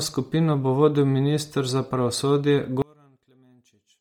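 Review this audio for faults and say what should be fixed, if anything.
From start to finish the speech has a breathy, grainy edge and a dull, smeared top end, as though the upper range were replaced by hiss. The likely cause is heavy Bluetooth LC3 compression: working in 10 ms frames, the codec discards much of the upper spectrum and fills it with noise, which fits a low rate of about 32 kbps. To prevent it, record over a wired path or raise the LE Audio link to a higher-quality LC3 setting.

From 2.82 s to the end, the speech suddenly drops by about 34 dB and becomes a faint trace. This is likely one channel inverted: with one side's polarity flipped, the shared centre content cancels when the channels are summed to mono, leaving only their small difference. To prevent it, check channel polarity in the signal chain and confirm mono compatibility before export.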